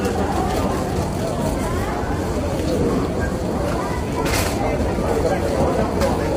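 From start to finish the sound has a rough, grainy texture with noise filling the gaps between tonal parts and a dull, somewhat synthetic top end, the kind of heavy damage that likely comes from low-delay AAC compression, AAC-ELD, at a low rate around 24 kbps.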